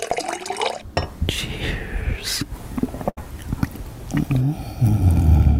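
At about 3.09 s there's a burst of packet loss running to 3.19 s. A run of packets never made it in time, so the receiver stretched the last bit of sound over roughly 73 ms, fading it down, then jumped ahead with about 80 ms simply gone.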